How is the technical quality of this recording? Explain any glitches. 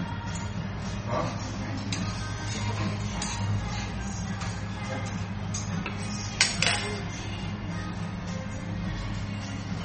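The recording is noticeably degraded. Throughout, it carries plainly audible MP3 compression, likely from a bitrate that fits roughly 32 kbps. Starved of bits, the encoder removes everything above 8.4 kHz and drops weak frequency lines that flicker between frames. That gives a watery, swirling texture, not the clean dullness of a simple low-pass filter.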